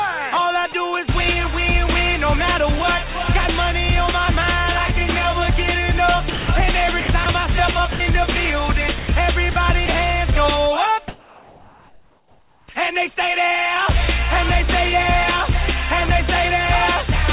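A voice detector at the sending end, likely misjudging parts of the signal as background, repeatedly stopped transmission, so the receiver substituted comfort noise. This sound dropped by the voice detector happens at 0.72–0.74, 6.3–6.48, 7.92–8.0, 8.98–9.08, 9.52–9.56 and 9.86–9.88 s. At each point the real sound gives way to flat synthetic hiss for 20 to 180 ms, with the longest gap at 6.3 s, and returns once the detector triggers again. Between 7.0 and 7.26 s the same detector likely switched on and off more than once, producing sound chopped by the voice detector: about 100 ms of that stretch is replaced by fill, so the passage stutters. From 11.08 to 12.68 s transmission likely pauses under discontinuous transmission, and comfort noise replaces the background for 1.6 s. The real ambience, sitting about 32 dB below the loudest passages, is swapped for a steady, featureless noise at the same level. 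It matches the surrounding background in loudness but has none of its texture. Everything passes through a narrowband call path with nothing above 4 kHz, consistent with G.711 A-law at 64 kbps, which gives the audio its telephone-band dullness.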